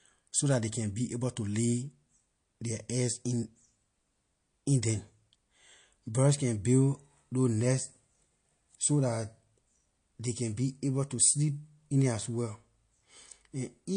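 Low-bitrate audio saved at a high bitrate runs through this speech from start to end: the material was likely squeezed through a low-rate MP3 encode first, then re-saved generously. Nothing survives above 9.8 kHz, a cut-off that points to roughly 48 kbit/s, and re-encoding cannot restore that missing top end.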